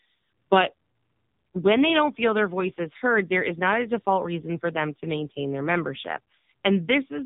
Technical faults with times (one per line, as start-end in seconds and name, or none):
0.00-7.25 AMR narrowband mobile codec